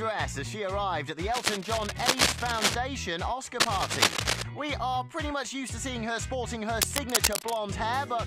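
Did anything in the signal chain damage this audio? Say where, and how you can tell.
Yes: cable scratch noise in the analogue wiring at 1.27–2.75 s, 3.60–4.42 s and 6.73–7.56 s. Dense, ragged scratching sits at roughly the sound's own level, a bit louder in the middle burst, likely from a worn connector whose contact resistance flickers when moved.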